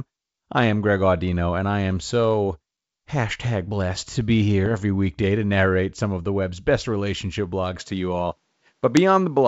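Between 4.66 and 4.84 s, bit errors on an ADPCM link produce pops and a rough, gritty burst. Each flipped bit throws off the decoder's step size and prediction, so the damage rings briefly. The waveform shows spikes and short level jumps, and the spectrogram shows vertical broadband streaks.

From 7.8 s to the end, the sound turns slightly dull, with no gap and no change in level. The likely cause is an input switched to a poorer device. On a spectrogram, energy stops abruptly at about 8.3 kHz, and a faint new noise floor appears about 50 dB down.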